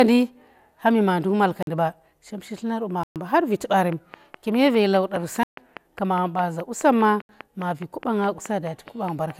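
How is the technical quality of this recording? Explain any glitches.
The recording has three problems: codec degradation throughout, four dropouts, and a steady click train from 3.9 s to near the end.

Generation loss runs through the whole clip. The speech sounds swirly and hollow, with smeared consonant attacks and nothing above 16.7 kHz. This likely comes from about four successive passes through MP2 at 128 kbit/s, each requantising on a shifted frame grid so the noise and spectral holes pile up.

Blocks of digital silence occur at 1.63–1.67 s (46 ms, which fits a 2048-sample buffer), 3.03–3.16 s (124 ms), 5.43–5.57 s (139 ms) and 7.22–7.29 s (75 ms). The output buffer likely wasn't filled in time, so the audio drops to zero abruptly, leaving a hard hole.

A train of clicks starts at 3.92 s and lasts to 9.31 s. It is a regular ticking at about 4.8 per second, roughly thirty clicks in all, peaking about 5 dB above the speech and audible in the pauses. 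The likely cause is interference or a struggling interface injecting near-identical pulses.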